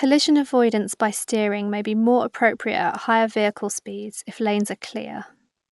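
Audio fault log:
Throughout: Dolby Digital compression, most likely a 64 kbps stream, and the damage is plainly audible on this speech. Nothing comes through above about 11.5 kHz, so the whole thing sounds dull and closed in. At that rate the encoder runs short of bits for much of the spectrum, and the decoder papers over the empty frequency lines with filler noise, which is why there's a rough, fluttery grain hanging around the voiced sounds.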